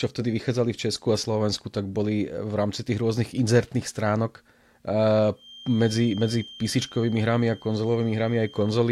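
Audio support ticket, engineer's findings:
Feedback whistle from 5.33 s to end of clip. Thin, steady tone at 3.2 kHz, sitting well below the speech, level swelling and fading slowly. Likely loudspeaker-to-mic loop held at the edge of feedback. Single frequency sustains, never runs away.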